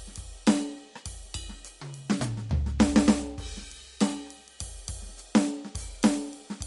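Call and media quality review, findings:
MP3 compression throughout the music: nothing above 11.2 kHz, plus a watery swirl a plain low-pass wouldn't cause. Likely a low-bitrate encode, consistent with 48 kbps.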